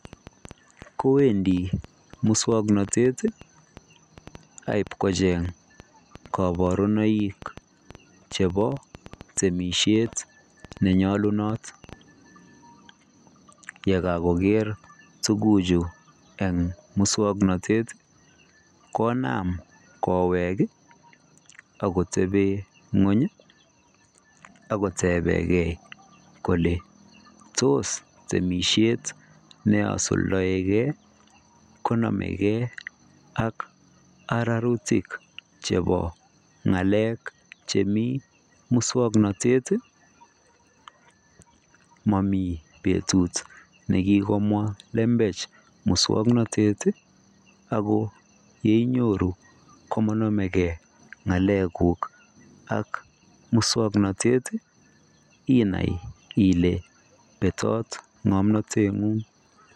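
From 0.05 to 11.94 s a train of clicks, around 70 same-shaped ticks at an uneven 5.2 per second, about as loud as the speech and continuing through pauses, likely interference.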